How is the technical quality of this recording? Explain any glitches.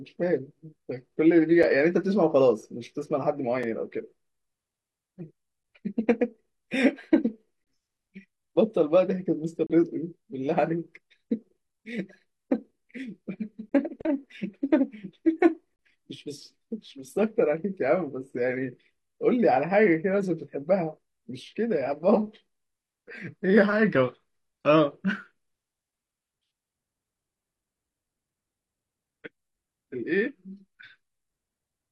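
The speech is broken by eight short, hard-edged dropouts to silence, at 1.63, 3.63, 5.63, 7.64–7.67, 9.67–9.70, 11.69, 13.69–13.72 and 15.76–15.79 s. This is a gap between stream segments. The holes arrive every 2 s and last 3 to 32 ms. Each one falls where one 2-second segment's timestamps stop just short of the next segment's. The player pads that small space with silence, so nothing is actually lost.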